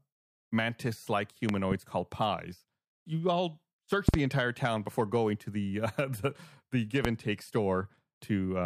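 Sharp loud pops jump roughly 20 to 25 dB above the speech: doubled at 1.49–1.74 s before "called pies" and 4.09–4.16 s before "entire town before going", single at 7.05–7.07 s between "uh the the give" and "and take". Speech continues underneath. Likely a voltage spike from a plug, switch or static.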